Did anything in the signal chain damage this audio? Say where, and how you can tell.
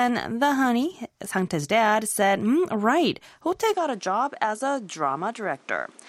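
Yes. At 3.74 s the sound changes abruptly and stays changed to the end. The top end is cut off, with nothing above 11.2 kHz, so it turns duller. The level drops by roughly 5 dB. A new background noise appears, around 30 dB below the signal. There is no gap at the change. This is likely an input switched to a poorer device at the driver or device-routing stage. The new microphone brings its own band limit, gain and noise floor.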